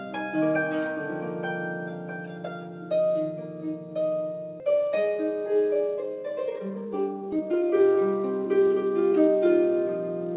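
Skip ahead at 4.6 s: a stretch of audio, about a second and a half of it, never reached playback. It was either lost in transit or thrown out when the jitter buffer overflowed while later audio sat queued behind it. Nothing fills the hole. The sound before the jump is butted straight against the sound after it, so the listener hears an abrupt forward leap with no pause, and that span is simply gone.

Jitter buffer speed-up from 5.74 to 9.29 s: after the jump, the buffer still held more audio than its target, as happens when delayed packets arrive in a bunch. To pull the delay back down, the receiver repeatedly cut out short slices of one or a few pitch periods, removing around a second in total. Playback runs at about 126% speed while the pitch stays put, giving a rushed, pressed-forward quality. Throughout, the band stops at 4 kHz, which fits a narrowband G.711-type call codec.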